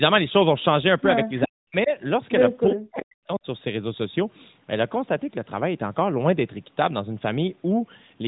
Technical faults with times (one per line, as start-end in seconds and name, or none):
1.37-1.45 echo leak
1.44-1.92 speech suppressed in double talk
2.72-3.46 speech suppressed in double talk